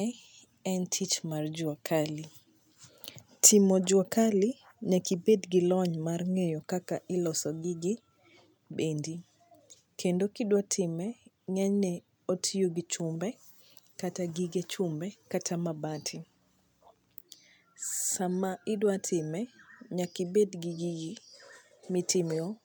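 A speech recording with no technical fault to report. Nothing in the audio calls for a time or a cause.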